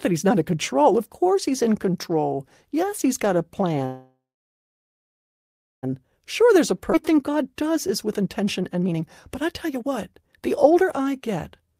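A speech recording with a call audio freeze from 3.85 to 5.85 s: the last sound carries on briefly, then about 1.6 s of silence follows before speech resumes where it stopped. Nothing is lost, but roughly 2 s of delay is added, most likely because delayed packets left the jitter buffer empty. A jitter buffer speed-up follows from 5.92 to 6.72 s, with playback at 107% and about 70 ms trimmed in pitch-period slices, so the speech runs slightly fast at unchanged pitch. At 6.92 to 6.95 s there is a skip ahead: around a second of audio is dropped and the two sides are spliced almost directly, with only a 7 ms fill, which cuts a large share of the built-up delay. A second, stronger speed-up from 7.11 to 11.76 s runs at 121% and removes about a second in total, making the speech sound noticeably hurried at normal pitch.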